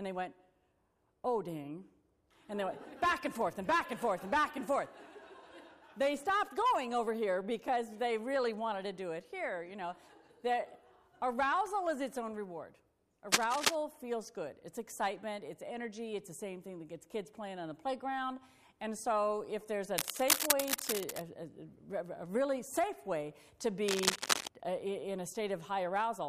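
Bursts of cable scratch noise sit over the sound at 13.31–13.75 s, 19.98–21.22 s and 23.88–24.48 s. The first is louder than the sound and the others are about level with it. Unlike steady crackle or isolated digital clicks, each is a dense, uneven rustle, likely from a worn connector being moved.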